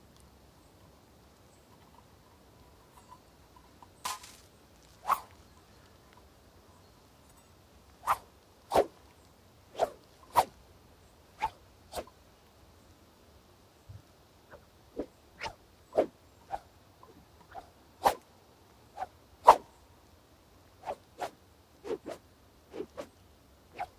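Nothing in these everyday sounds stands out as a technical fault at any point.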